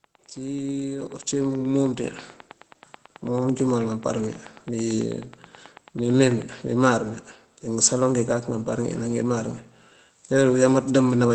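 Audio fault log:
0.04–6.53 s, train of clicks: a steady ticking runs over the speech and through its pauses, about 9.3 clicks per second at an even spacing, roughly seventy in all, each sharp pop reaching about the level of the speech itself. Because every click has much the same shape and the pace never wavers, this is likely an external pulse source, such as interference from nearby equipment or a faulty connection or power supply, injecting into the signal.
1.02 s, microphone volume stepped up: the speech and the background noise behind it jump louder together in a single step of about 8 dB. Both rise by the same amount because the call software judged the microphone too quiet and raised the device's input gain at once, scaling everything the microphone picked up.
2.04 s, microphone volume stepped up: a second abrupt lift follows about a second later, this time about 5 dB, again carrying speech and background up together. 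The software evidently still found the input too low after the first adjustment and raised the device gain once more in a single step rather than ramping it smoothly, so the jump is heard as a sudden shift in loudness.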